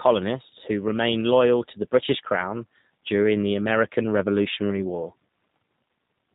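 A speech clip squeezed through a G.729 codec from start to finish, and you can plainly hear it: nothing above 4 kHz, a rough, slightly synthetic edge from the pulse-based rebuild, all of which fits a low-rate G.729A VoIP path at around 8 kbit/s.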